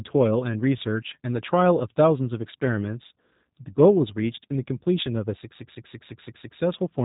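G.729 codec damage runs through the whole speech clip: it is rebuilt from a vocal-tract filter, pitch predictor and a few pulses per short frame, which fits an 8 kbit/s G.729A stream. Nothing passes above 3.8 kHz, leaving it plainly rough and synthetic.

CD stuck on one turn from 5.58 to 6.59 s: the pickup jumps back by the same amount each revolution, so one 0.17 s slice repeats six times, each pass cut by a brief mute at the jump, giving a fast, even skipping stutter.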